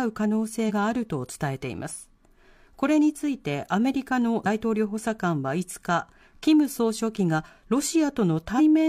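Damaged data in a compressed stream breaks the speech four times: 0.65–0.72 s, 4.42–4.47 s, 6.18–6.23 s and 8.55–8.60 s. Corrupted bytes make the decoder misread frames and lose sync. Each event is a brief chirp, squawk, click or short hole, about 50–60 ms long.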